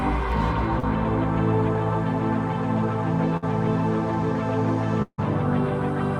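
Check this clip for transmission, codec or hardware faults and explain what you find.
Three transmission faults affect the clip, all from audio lost in the network before decoding.

At 0.79 to 0.85 s there is short concealed packet loss. About 40 ms of audio never arrived, and the receiver synthesised roughly 35 ms by extending the preceding sound before blending back in. The result is a brief smear or wobble.

From 3.37 to 3.44 s a burst of packet loss removed about 60 ms. The decoder bridged roughly 53 ms by prolonging the last sound and lowering its level, so a short held buzz or fading hiss replaces the lost material. The audio then resumes slightly further on.

Between 5.02 and 5.20 s, about 160 ms of audio is missing. The decoder stretches the last sound for roughly 156 ms as it fades, leaving about 60 ms of silence before the sound returns further along. This is likely a long network dropout.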